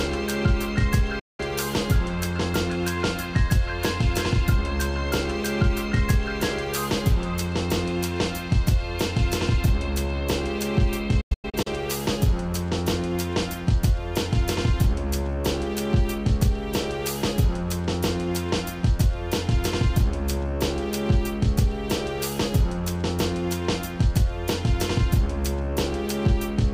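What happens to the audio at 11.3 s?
A digital broadcast dropout, 11.21 to 11.67 s: failed frames mute the receiver, leaving short silent holes, longest 96 ms, shown as blank waveform gaps.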